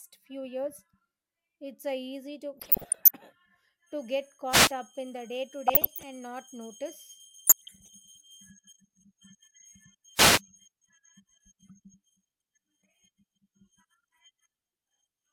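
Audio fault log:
2.58–3.11 s, 5.68–6.03 s, 7.47–7.95 s: DAB burbling. Bit errors at roughly 0.7 to 1 percent corrupt sub-band samples and levels, giving short noise blips and level jumps in single sub-bands. On a spectrogram it shows as flickering isolated band blocks.
4.48–4.73 s, 10.14–10.42 s: wireless microphone noise hit. The FM link fades and receiver noise surges as a brief swish of static. On a spectrogram it appears as a broadband hiss band.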